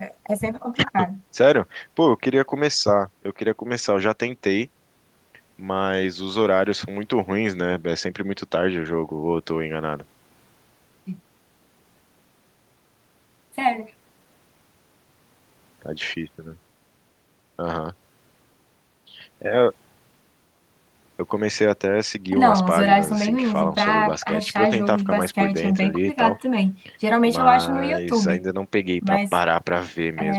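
No technical faults can be heard anywhere in the speech. Nothing in the recording needs a timestamp or a closer look.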